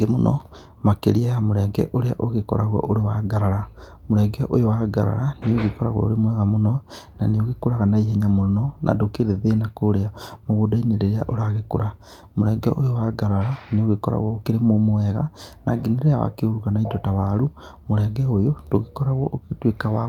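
Nothing in this recording stands out as a technical fault, so there's no problem to point to at any moment along the way.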